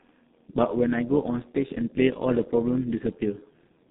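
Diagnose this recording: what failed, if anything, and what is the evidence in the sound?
G.723.1 codec, throughout: the speech is muffled and hoarse with smeared consonants, and nothing reaches above 4 kHz. The band sits between 150 Hz and 3.7 kHz. This points to the codec stage, a heavily compressed stream fitting about 6.3 kbit/s with coarse, slowly updated voice modelling.

Overlap-add ripple, throughout: a metallic buzz rides on the speech, with the level swinging by about 6 dB at around a hundred times a second. This is a call-processing fault, where frames were windowed and rejoined with an overlap that does not sum to constant gain.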